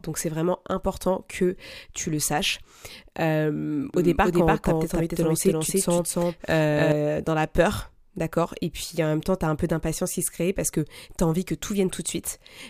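From 3.94 s to 6.92 s the speech carries a doubled audio track. A second full-band copy runs roughly 300 ms behind at about equal level, dry and without room colour, switching in and out abruptly, ending just before "dans la peur". Likely a second capture path or misaligned edit.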